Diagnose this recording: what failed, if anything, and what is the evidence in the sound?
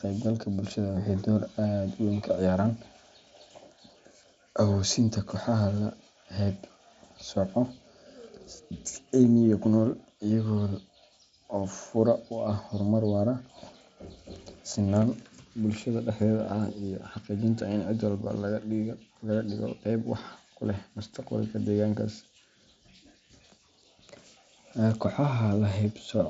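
Nothing here points to a failure: the speech comes through a Bluetooth mSBC headset link behaving as that path should, with the band stopping at about 7.7 kHz as expected for this wideband codec, and no stage shows anything gone wrong.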